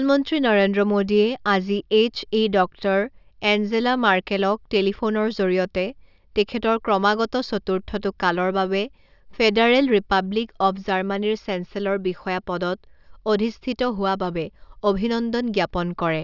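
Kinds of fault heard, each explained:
No technical faults heard.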